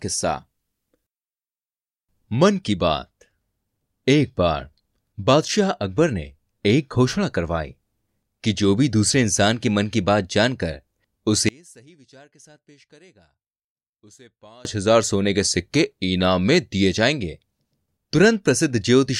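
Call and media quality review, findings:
Speech nearly vanishes 11.49–14.65 s, down about 31 dB, leaving a faint residue. Likely one channel inverted upstream of a mono fold-down: flipped polarity cancels the shared centre content when L and R are summed.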